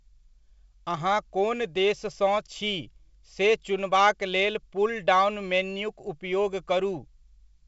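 There are no technical faults to describe in time order; the speech comes through G.722 wideband telephone coding at 64 kbit/s, with nothing above 7.7 kHz.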